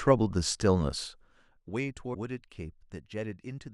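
From 2.13 to 2.16 s the speech briefly skips ahead. The likely cause is a broken MP3 bit reservoir after cut frames.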